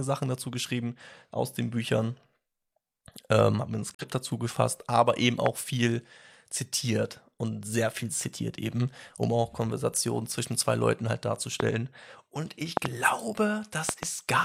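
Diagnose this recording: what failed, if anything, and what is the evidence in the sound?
Digital broadcast dropout at 3.94 to 4.05 s, at the reception and decoding stage: the audio fades out over about 8 ms, sits muted, then returns. The gap of about 43 ms fits a single frame that failed its check, so the receiver muted until good frames resumed.

Loud pops at 5.46 s, 11.60 s, 12.77 to 12.87 s and 13.89 to 14.05 s. The last two events are each a double pop. Each stands roughly 20 dB above the audio, which carries on underneath. The likely cause is a voltage step from a switch, plug or static in the analogue wiring.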